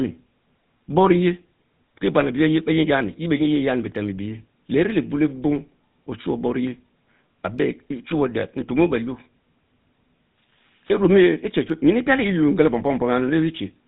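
From start to finish, the speech carries GSM full-rate codec damage. It is plainly audible. Everything above 4 kHz is gone. The voice sounds buzzy and gravelly, because a coarse pulse train rebuilds it through a vocal-tract model. The grain fits a 13 kbps stream.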